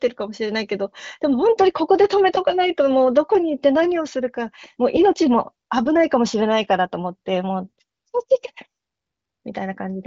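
No faults are audible; the speech passes through the AMR wideband (HD Voice) codec at a rate that fits its 23.05 kbit/s mode, with the band stopping at about 7.7 kHz.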